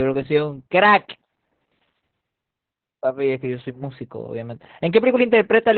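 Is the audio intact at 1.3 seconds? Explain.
No. At 1.3 seconds, as across the whole speech clip, the audio carries Opus voice compression damage. The codec is running its SILK linear-prediction coder in narrowband mode, so nothing is present above about 4.3 kHz and the excitation is coded coarsely. The speech sounds muffled, hoarse and slightly robotic. The damage is heavy, which points to a very low bitrate, in line with roughly 8 kbps.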